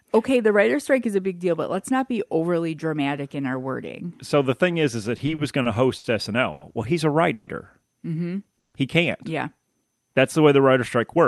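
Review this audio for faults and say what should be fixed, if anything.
Repeated stalls (stutter) run from 5.17 to 6.06 s, right after "thing is is that". The jitter buffer emptied five times, and each gap was bridged by extending the preceding sound. About 140 ms was filled in total, the longest 60 ms, about 16% of the span. Nothing is lost, but the phrase drags and judders. A deeper adaptive jitter buffer would absorb this uneven packet arrival.

A short stall from a late packet occurs at 6.52 to 6.63 s. One packet missed its playout time, so the receiver held the last sound for 90 ms until it arrived and then resumed from the same point. The result is a stretched moment with a slight buzz or dip. More buffer headroom for sudden delay jumps would cover a 90 ms late packet.

Call audio freezes occur at 7.33 to 7.49 s, after "he's a", and again at 8.59 to 8.75 s. Each inserts about 140 ms of buzzing or hissing continuation of the previous sound, which does not drop to silence, before the audio resumes where it left off. 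The likely cause is network hold-ups that raised delay by 140 ms and drained the buffer. Stabilising the network route would prevent these freezes, and so would letting the buffer grow ahead of such spikes.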